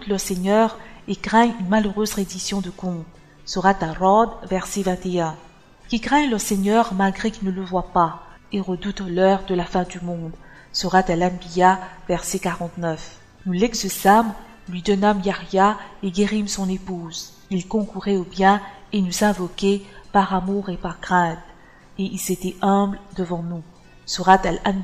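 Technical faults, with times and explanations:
0.74 s and 16.86 s, lost LE Audio frames. Each gap lasts 10 ms, which fits a single missing LC3 frame. The decoder fills the gap by repeating the last spectrum with randomised signs. A brief noisy smear replaces the sound, then normal audio resumes.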